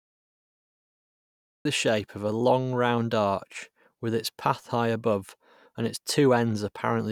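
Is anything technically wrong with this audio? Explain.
Yes, there is a cut-off start. The recording or stream only began capturing partway into the speech, so the clip holds digital silence from 0.0 to 1.65 s. At 1.65 s the speech appears abruptly mid-sound, with no natural attack or fade-in.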